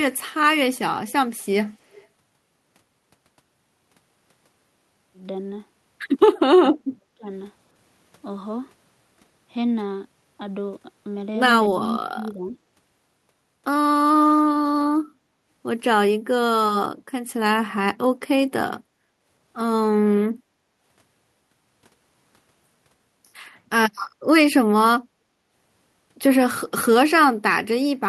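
At 1.06, 1.37, 1.65 and 1.9 s, faint scraps of the speech return about 319 ms after the original. This is likely an echo leak. A far-end loudspeaker fed the microphone, and the echo canceller left residue that came back down the line. The scraps are short. They sit roughly 30 dB below the speech, and the one at 1.37 s is fainter still, nearer 40 dB down.

From 6.55 to 7.27 s the speech sinks. Half a second of it is affected, and at its worst it falls around 35 dB. From 11.71 to 12.58 s a milder dip of roughly 15 dB covers about 0.7 s. Both are likely speech suppressed in double talk. The other side spoke at the same moment. The canceller could not tell this talker from the echo, so it turned everything down.

At 19.1 s the room sound dips for roughly 150 ms, by about 9 dB. From 20.34 to 20.81 s it drops again, by about 12 dB, for half a second. This is background gated by the echo canceller. 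The loudspeaker was playing, so the canceller clamped the microphone hard. The ambience dips and returns when the canceller releases.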